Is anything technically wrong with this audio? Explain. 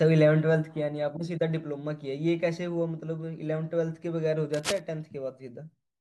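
Yes. From 4.54 to 4.80 s there is cable scratch noise, dense uneven rustling about 5 dB below the speech, likely from a worn connector whose contact resistance fluctuated when moved.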